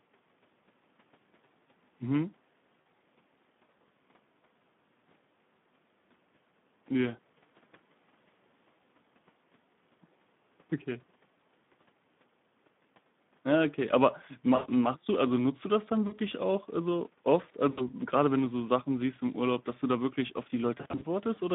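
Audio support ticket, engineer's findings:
Speex codec, throughout: hoarse, noisy speech, band limited to about 150 Hz to 3.6 kHz. Sparse CELP excitation, consistent with an 11 kbps mode.

VoIP packet loss concealed by the speech codec at 2.82–2.85, 14.55–14.67, 16.07–16.17, 17.71–17.93 and 20.77–21.05 s (scattered bursts). Fading extrapolation of the last pitch and filter. Weak onset after each gap.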